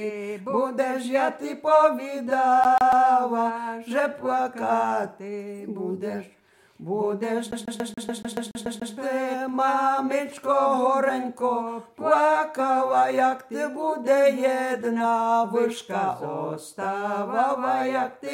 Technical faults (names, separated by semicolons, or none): CD stuck on one turn